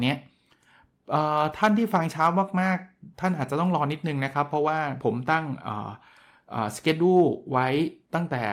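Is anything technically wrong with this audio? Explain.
No, nothing technically wrong can be heard here.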